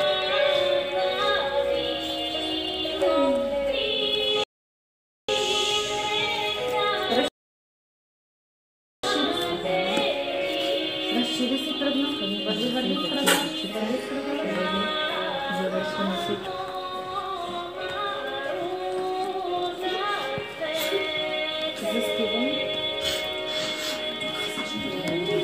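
A rebuffering stall interrupts the audio from 4.44 to 5.29 s, and a second runs from 7.28 to 9.04 s. Each time, the player exhausted its downloaded buffer and paused until more data arrived. The sound drops abruptly to silence, then picks up at exactly the point where it stopped, with nothing skipped. The gaps add about 0.85 s and 1.75 s to the running time.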